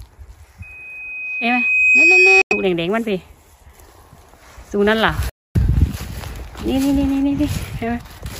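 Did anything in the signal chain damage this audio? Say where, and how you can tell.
Yes, two faults are audible. The first is a loudspeaker feedback squeal, an acoustic loop between the playback loudspeaker and the capture microphone. From 0.62 s a single 2.5 kHz tone swells over roughly one and a half seconds until it sits about 10 dB above the wanted sound, and it lasts until 2.75 s. Loop gain at that frequency exceeded unity, so the tone kept reinforcing itself on each pass through the loop.

The second fault is two holes in the output, at 2.42 to 2.53 s (about 93 ms, inside the tail of the squeal) and at 5.29 to 5.57 s (about 255 ms). Each time the sound drops out and then resumes further along, as though it had kept playing underneath. That points to a wireless playback link, most likely a Bluetooth dropout, where audio packets missed their deadline and were discarded rather than delivered late.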